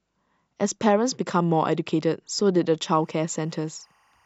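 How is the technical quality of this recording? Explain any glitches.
The recording has one technical fault, in its final stretch. From 3.00 s to the end at 4.25 s, timecode bleed appears: linear timecode from an adjacent track or cable leaks in faintly, a chirping warble near 1 and 2 kHz, roughly 40 dB below the speech. Its rhythm fits 23.976 fps code. On a spectrogram it shows as alternating horizontal bands.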